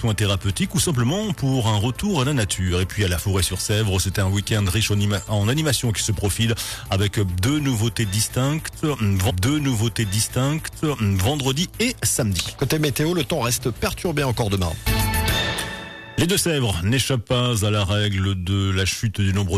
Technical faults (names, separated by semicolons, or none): stream segment repeated